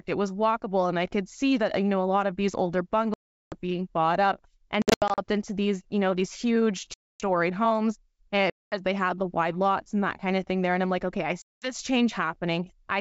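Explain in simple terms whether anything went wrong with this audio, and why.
Packet loss on an ADPCM call causes dropouts at 3.14–3.58 s (after "lot of these older"), 4.82–5.19 s, 6.94–7.22 s, 8.50–8.75 s (after "homes uh") and 11.42–11.73 s. Chunks of the call went missing and became abrupt silence, and each time the decoder lost track of the sound, so it returns slightly distorted.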